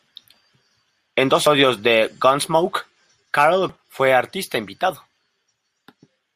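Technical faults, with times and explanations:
1.47 s and 3.69 s (just before "fue artista"), damaged data in a compressed stream: corrupted frames make the decoder lose sync and hunt for the next header, producing a chirp, squawk, click or short hole.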